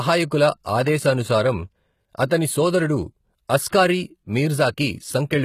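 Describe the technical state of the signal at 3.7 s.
At 3.70 to 3.73 s there is pre-echo: a short hiss of about 30 ms runs ahead of a sharp onset in the speech, and the attack itself lands soft and smeared rather than crisp. The codec sizes its quantisation noise for the loudest part of each transform block and spreads it across the whole block. Here the transient falls late in its block, so that noise also fills the quiet stretch just before it.

The same moment also carries the plainly audible damage present throughout the clip, whose sound points to HE-AAC compression as the likely cause, at a rate around 20 kbps in the v2 profile. Only the lower spectrum is coded directly, and the treble is rebuilt by copying lower bands upward under a coarse envelope. That leaves sibilants gritty and metallic, with harmonics that do not line up across the crossover and nothing above 14.9 kHz.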